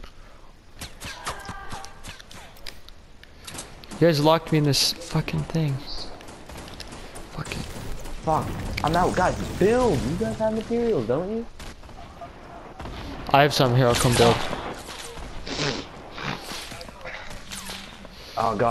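Nothing here stands out as a technical fault; the audio just carries on without anything going wrong along the way.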